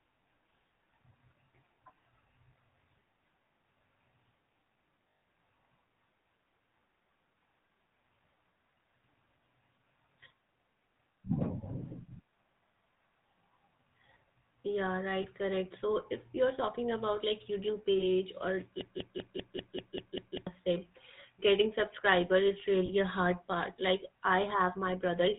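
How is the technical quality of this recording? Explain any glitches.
Technical quality is limited by plainly audible phone-codec coloration, with several short dropouts and one stretch that repeats.

Throughout, the sound has the buzzy, gravelly roughness of the GSM full-rate codec, consistent with 13 kbps. The codec rebuilds the sound from a vocal-tract model driven by sparse pulses and passes nothing above 4 kHz. Unlike generic low-bitrate blur, the grit here is pulse-driven buzz.

From 5.09 to 5.21 s, lost GSM frames leave a gap. This loss points to about seven frames, roughly 140 ms of audio. The decoder repeats the last good frame, so you hear a metallic ring rather than a clean silence.

Shorter lost GSM frames occur at 15.22 s, 17.98 s and 22.86 s. Each covers about 20 ms, a single frame's worth, and leaves only a brief rough smear.

From 18.81 to 20.47 s, a broken-record loop repeats a 195.53 ms fragment exactly, eight times back to back. 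The likely cause is a stalled player or stream resending its last buffer, and the audio that should have played there is lost. Unlike the decaying frame concealment, the loop repeats at constant level and in identical copies.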